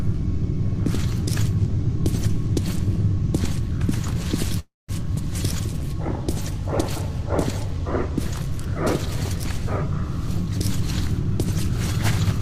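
A call audio freeze breaks the audio from 4.59 to 4.90 s. The last sound carries on as a fading buzz or hiss, then about 190 ms of silence, and the audio resumes exactly where it stopped. The likely cause is delayed packets draining the jitter buffer. On a spectrogram this shows as smeared horizontal bands fading into a blank gap. From 10.51 to 11.25 s a jitter buffer speed-up plays the audio at about 107% speed with unchanged pitch. Repeated pitch-period cuts remove roughly 50 ms in total. On a waveform some whole periods are missing while the rest keep their length, and the harmonic lines on a spectrogram stay at the same height.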